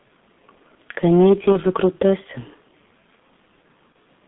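Throughout, the G.723.1 codec muffles and roughens the speech. Nothing passes above 3.6 kHz or below 150 Hz. The heavy damage points to its 6.3 kbit/s rate.

At 1.52 to 1.59 s, and again at 3.93 s, VoIP packet loss concealed by the speech codec appears. Each gap fits one lost 30 ms frame. The decoder guesses it, leaving a brief stretched, fading smear.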